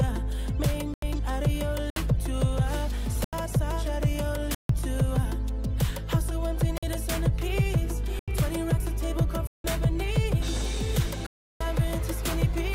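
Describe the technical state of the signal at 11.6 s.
At 11.6 s the sound is just returning from a short hole: a block of digital silence running from 11.26 to 11.61 s, about 341 ms, cutting out and back with no fade. Samples were zeroed, likely because the output buffer wasn't filled in time; the gap fits a 16384-sample block.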